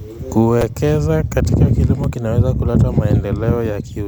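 Repeated buffer at 0.61 s and 2.04 s: new speech audio arrived late, so the device replayed its last 5.33 ms block, which fits a 256-sample buffer. It repeats twice at 0.61 s and once at 2.04 s, with hard joins that sound like brief buzzy clicks and drop a few milliseconds of audio.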